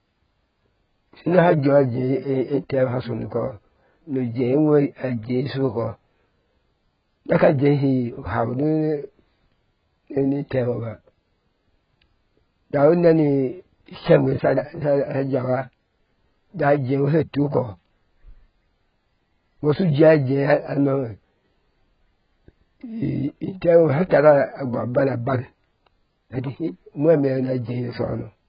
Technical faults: AAC compression

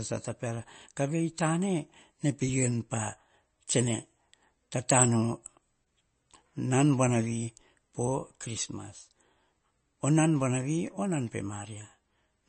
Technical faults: MP3 compression

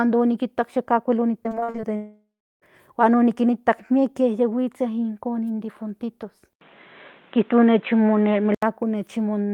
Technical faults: repeated packet loss (robotic sound); long network dropout; input switched to a poorer device

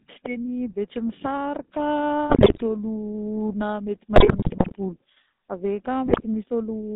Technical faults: GSM full-rate codec; GSM bit errors

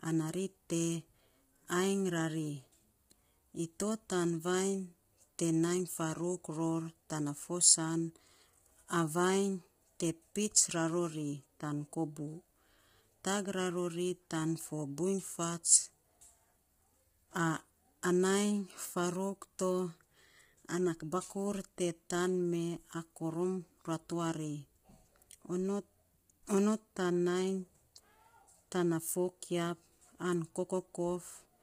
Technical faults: low-delay AAC compression

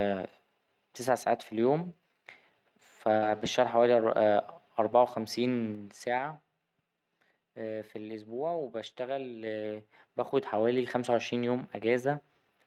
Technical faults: lost packet rebuilt from error correction; burst of packet loss; zipper noise

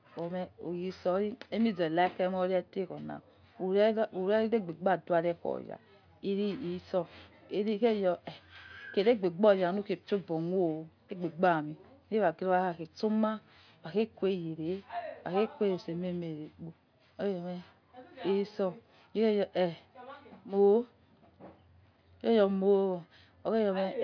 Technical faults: none

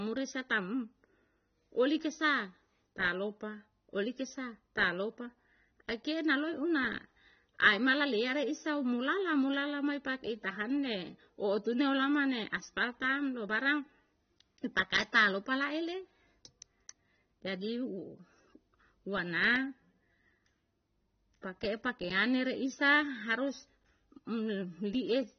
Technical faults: AAC compression

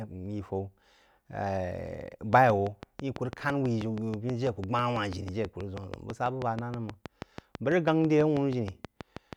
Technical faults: train of clicks

